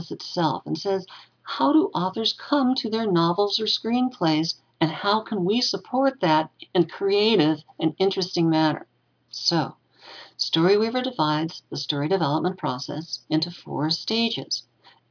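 No technical faults are audible.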